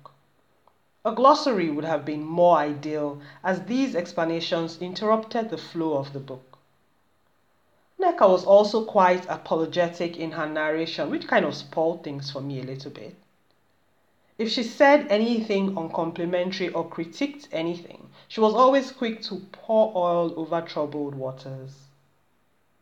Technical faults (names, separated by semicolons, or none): none